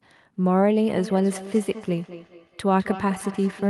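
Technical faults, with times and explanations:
0.88–3.69 s, feedback echo between two devices: the speech returns as a faint, thinner, ringing copy roughly every 200 ms, peaking about 15 dB below the direct sound. A second device in the room replays the call and the first device's microphone recaptures it, which the first device's echo canceller cannot remove.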